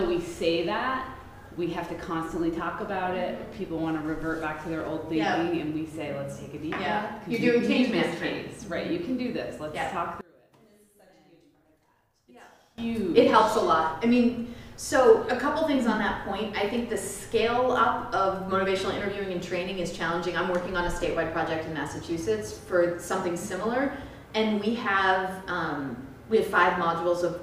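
One channel inverted, from 10.21 to 12.78 s, is the fault in this audio: across that stretch the sound collapses to a faint remnant, roughly 26 dB quieter than the surrounding material. The likely cause is reversed polarity on one stereo channel, so whatever the two channels share cancels when they are combined to mono. Only the small difference between left and right survives, which leaves the centred content nearly gone.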